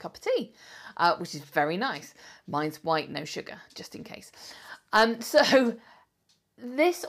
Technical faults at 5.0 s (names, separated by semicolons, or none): none